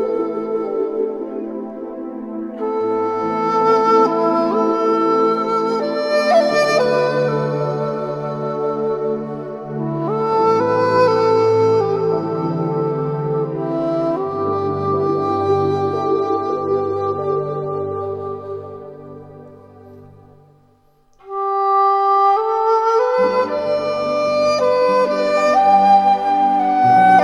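From 16.02 to 18.02 s the adaptive stream switches to a lower bitrate. The change fits a drop from 96 to 32 kbit/s AAC. Treble vanishes above 9.7 kHz and coding artefacts thicken, with abrupt transitions at both ends and no gap in playback.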